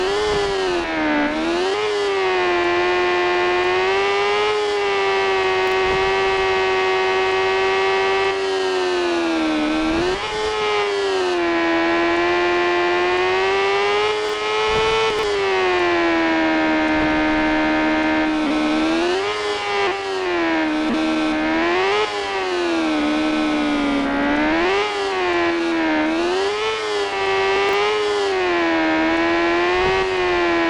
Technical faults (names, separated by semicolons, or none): chunks out of order